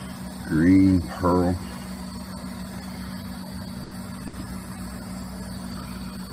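Two bursts of packet loss show up in the audio, first from 3.83 to 3.93 s and again from 4.27 to 4.35 s. Each time, a short run of packets never arrived in time, so the receiver stretched out the last bit of sound and let it fade, for about 80 ms and then about 60 ms. When playback picks up again, that chunk of the original is simply gone. Later, from 5.21 to 5.23 s and from 5.71 to 5.73 s, there are two lost packets rebuilt from error correction. These are single 20 ms losses, and the next packet carried a low-bitrate backup copy of each one (Opus in-band FEC), which the decoder played in their place. So there's no gap at either point, just a brief stretch that sounds rougher and noisier than the audio around it.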